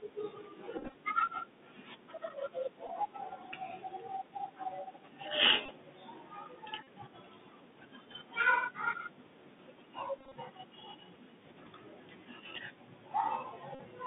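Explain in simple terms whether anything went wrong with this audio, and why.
Yes, two things went wrong. The whole speech clip has passed through a Bluetooth CVSD headset codec, the basic phone-call link in wireless headsets. It keeps only a narrow band of sound, up to about 3.6 kHz, so everything sounds thin and boxy. Unlike ordinary muffling, it also adds a grainy hiss underneath and makes s sounds scratchy.

On top of that, the headset packet was repeated several times. When bits of sound got lost in the wireless link, the chip replayed the last piece it had received. This happened at 0.78–0.95 s, 2.87–2.89 s, 5.66–5.71 s, 6.83–6.86 s, 10.19–10.36 s and 13.75–13.79 s. Unlike a dropout, which leaves silence, the replayed pieces give a short, steady buzz.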